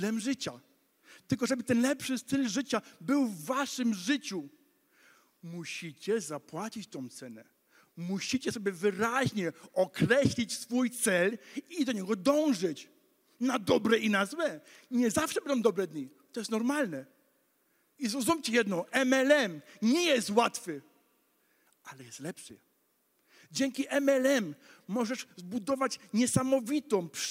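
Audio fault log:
No fault to log.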